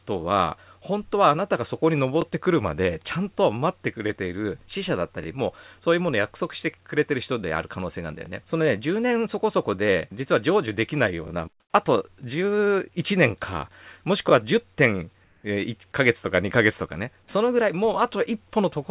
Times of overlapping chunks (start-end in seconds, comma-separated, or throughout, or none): 2.22-2.24, 5.24, 8.26, 11.28, 14.30